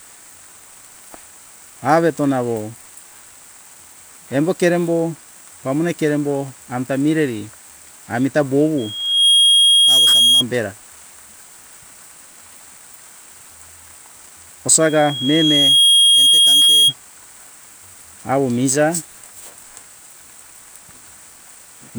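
Speech, twice interrupted by loudspeaker feedback squeal. A single tone near 3.3 kHz swells up from 8.77 to 10.44 s, then again from 14.80 to 16.94 s. The first builds in about half a second, the second in about a second. Each peaks around 5 dB above the speech. A microphone was picking up its own loudspeaker. At that frequency the loop gain passed one, so the tone fed on itself.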